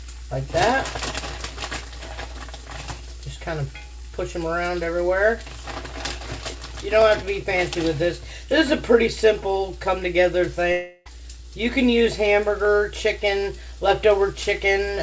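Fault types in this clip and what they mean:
Long network dropout: From 10.72 to 11.08 s the audio gives way to a smeared continuation of the preceding sound, a buzzy hiss that decays over about 340 ms without reaching true silence. The sound then resumes, with that stretch of material simply gone. This is likely a run of lost packets that the receiver's concealment bridged. It occurs on a band-limited path with nothing above 8 kHz, consistent with G.722.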